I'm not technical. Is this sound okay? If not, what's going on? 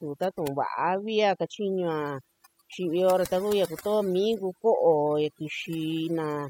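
No. A noise reduction tool was turned up far too strong on this speech, which is overdone noise removal, and it affects the whole clip from start to finish. The tool tries to strip out background noise, but set this hard it also cuts away the softer parts of the voice along with the noise. As a result, the background drops and breaks up into small twinkling specks.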